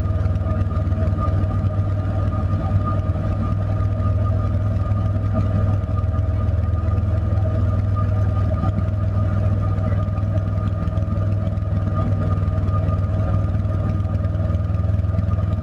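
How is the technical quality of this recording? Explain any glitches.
No audible glitches or faults.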